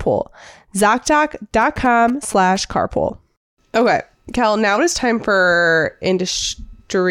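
From about 1.61 to 2.57 s you get GSM signalling bursts cutting across the speech: a galloping dit-dit-dit of short buzzes pitched at roughly 217 Hz, sitting around 15 dB under the talker. That's a 2G handset close by sending short groups of radio bursts while it signals the network, and the audio circuitry rectifies the RF so the burst pattern turns into audible clicks and buzz.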